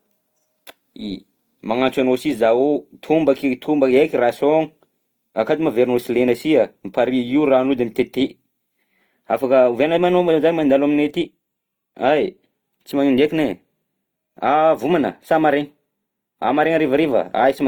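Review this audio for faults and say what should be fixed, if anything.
Transcoding between lossy codecs runs through the whole speech clip. Two kinds of coding artefact sit on top of each other: the smeared, watery texture of a low-rate speech codec, overlaid with the swirly high-frequency detail of MP3, with nothing above about 20.1 kHz. The likely cause is Opus coding at a rate that fits 24 kbit/s, then re-encoding to MP3 at a rate that fits 96 kbit/s. The MP3 stage spends its bits reproducing the earlier damage and adds its own. Encode once, straight from the original uncompressed source, to the final format.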